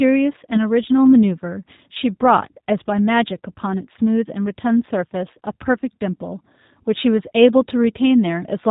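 Throughout, the speech sounds slightly rough and synthetic with nothing above 4 kHz, the plainly audible mark of G.729 coding at a rate that fits 8 kbit/s.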